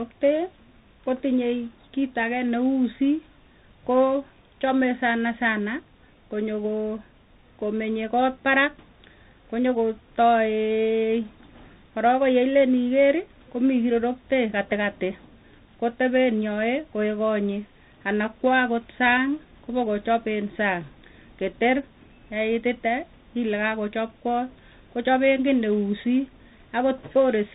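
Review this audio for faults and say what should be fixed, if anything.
Tandem speech coding throughout: the speech is rough and noisy, with nothing above 3.8 kHz. The grit points to CVSD coding applied twice, with a G.711 leg between. Keep the path in one codec end to end, or pass the coded stream through without decoding at each link border.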